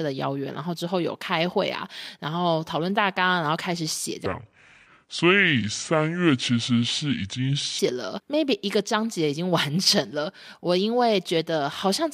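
From 4.26 to 7.79 s speech turns deep and sluggish, about seven semitones down: a section at the wrong speed, likely slowed to 0.636 times.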